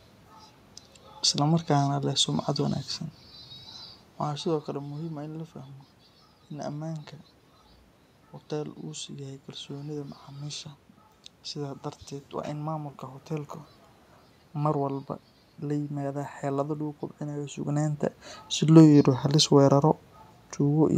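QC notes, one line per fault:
No system faults; the room noise and the level shifts early on and near the end, where the talker moves relative to the microphone, are part of the recording.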